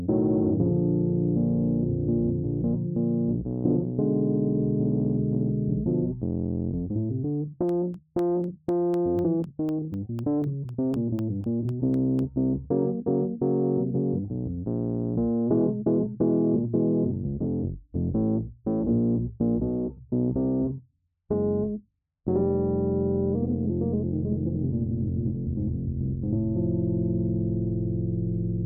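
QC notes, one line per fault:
7.69–12.19 s, periodic USB or driver dropouts: about twenty regular ticks, one every 0.25 s, as a recurring bus or driver stall swaps roughly half a millisecond of sound for silence.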